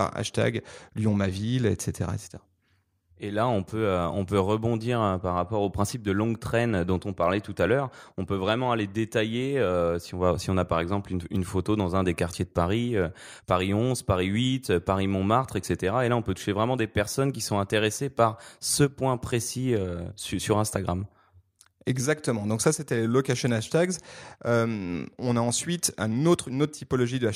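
No faults are audible anywhere in the recording.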